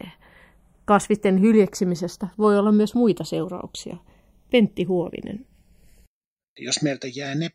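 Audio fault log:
Throughout: channels drifting apart. The left and right channels appear to run on separate clocks that disagree by roughly 70 parts per million, so the inter-channel delay grows steadily, reaching around half a millisecond by the end. When the speech is summed to mono, this creates comb-filter notches that glide downward through the spectrum, with the lowest settling near 1 kHz. The result is a slow, sweeping flanger-like colouration over the whole clip.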